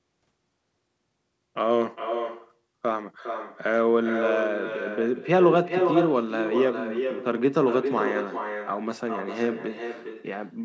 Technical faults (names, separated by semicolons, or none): echo with no canceller